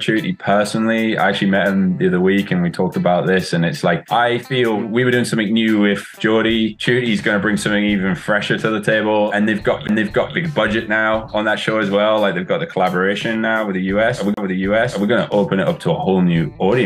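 At 9.87 s and again from 14.34 to 14.37 s, a CD skip jumps the laser to another turn of the disc's spiral, giving a brief muted tick before the sound resumes elsewhere.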